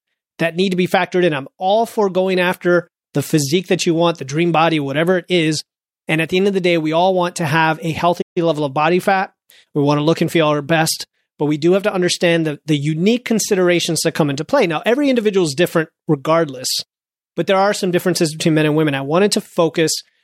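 At 8.21 s the player likely ran out of buffered data or had its output thread blocked, causing a playback stall. The speech cuts off in mid-flow and the output falls silent for about 142 ms before resuming, leaving an abrupt gap until 8.38 s.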